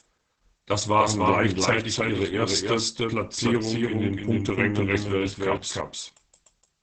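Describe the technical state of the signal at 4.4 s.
At 4.4 s the speech carries a doubled audio track, present throughout the clip. A second full-band copy trails the original by roughly a third of a second at about the same level, so every syllable is heard twice. It is most likely a second capture through a slower path being mixed back in. Unlike an acoustic echo or reverb, the copy has no decay and no room colour. It is a clean, equally loud duplicate at a fixed offset.

The same moment also shows heavy Opus voice compression, again for the whole clip. The sound is cut off above about 8 kHz, which fits Opus running its SILK speech coder in wideband mode at a low rate, near 10 kbps. The excitation is coded coarsely in short frames, so the speech comes out muffled, hoarse and somewhat robotic. That rough, buzzy texture separates it from a plain low-pass filter, which would dull the top without roughening the voice. 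It also differs from transform codecs, whose failures sound swirly or metallic.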